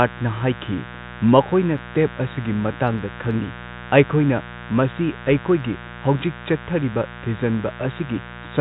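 A mains buzz runs through the whole speech recording, sitting roughly 15 dB below the talker. It is a harsh, raspy drone rather than a smooth hum, because sharp switching spikes from something like a dimmer, rectifier or poorly shielded cable are getting into the signal path at 60 Hz mains, twice per cycle. Those spikes carry harmonics that stack far above the fundamental, up into the kilohertz range. The top of the band stops near 4 kHz, as expected for G.711 telephone coding, which limits how high the buzz's harmonics can reach.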